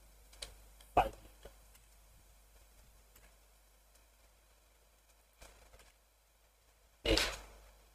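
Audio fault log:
3.98–7.03 s: jitter buffer speed-up. Across this stretch the audio runs about 4% fast with its pitch unchanged. The receiver's buffer had built up more audio than it targets, and it trimmed it back by cutting many short slices, each one or a few pitch periods long, for roughly a tenth of a second in all. A resampling speed error would shift the pitch as well. Here the pitch stays put.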